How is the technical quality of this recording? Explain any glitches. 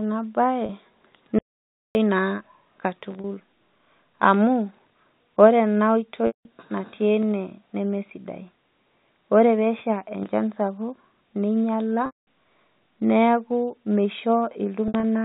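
The quality is patchy: a handful of packet-loss concealment glitches and one hard dropout, all sitting on telephone-band audio that stops at 4 kHz, as G.711 does.

Packet loss with pitch repetition turns up at 0.66 s and 3.21 s (30 ms each), 6.27 to 6.45 s (180 ms), 12.06 to 12.19 s (210 ms, right after "pesha enchan sapuk ninyala"), and 14.88 to 15.03 s (90 ms lost in scattered bits over 150 ms). The losses come in 30 ms steps, which fits 30 ms packets. For each gap the receiver loops the last pitch cycle. The short ones come across as a brief buzzy hold, and the longer ones drone, fade toward silence, then cross-fade back into the speech.

The audio dropout to silence runs from 1.39 to 1.95 s, about 560 ms of dead silence with no room tone. It's most likely a lost input or link, and whatever was said there is gone.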